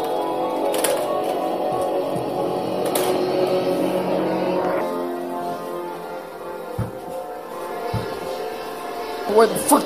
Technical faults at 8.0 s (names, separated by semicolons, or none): doubled audio track